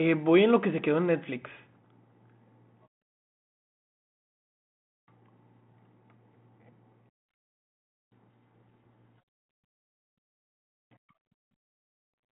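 From 8.14 to 9.20 s, a codec payload misread, which points to G.726 code words unpacked in reversed bit order, buries the speech in harsh distortion, smearing broadband noise across the 3.4 kHz telephone band.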